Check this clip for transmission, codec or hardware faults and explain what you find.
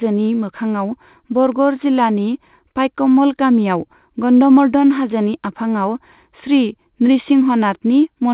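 No transmission, codec or hardware faults are present in this speech; the audio carries nothing above 4 kHz, as expected from a narrowband call path consistent with G.711 mu-law coding.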